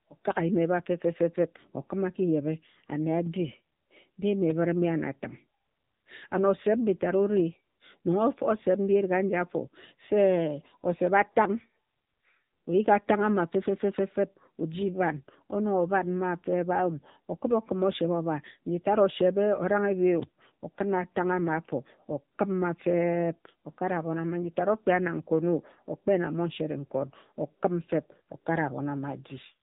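From start to finish the speech has passed through the AMR narrowband mobile codec, which models the vocal tract and excites it with a few pulses per short sub-frame rather than keeping the waveform itself. Everything above 3.8 kHz is gone, so the voice sounds boxed-in and telephone-like, lacking crisp consonants. The coding damage is plainly audible as a buzzy, synthetic edge, which fits one of AMR-NB's lower modes, around 7.95 kbps.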